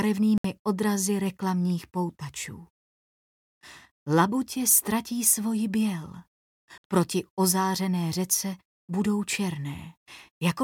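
A likely Bluetooth stall, where delayed wireless packets let the playback buffer run dry, drops the audio to silence twice: from 0.38 to 0.45 s, about 65 ms, and from 6.78 to 6.84 s, about 64 ms, with the sound resuming abruptly after each gap.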